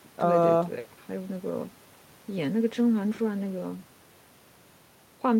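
Listening to this short speech recording, nothing stood out as a technical problem.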